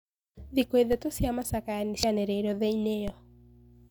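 Speech with two DC steps, at 0.93 s and 3.08 s: the waveform's zero line jumps and then decays back through a highpass near 20 Hz, giving a low thump while the speech continues intact, unlike a dropout. At 2.03 s, damaged data in the compressed stream makes the decoder lose sync, producing a brief glitch rather than a low-frequency thump.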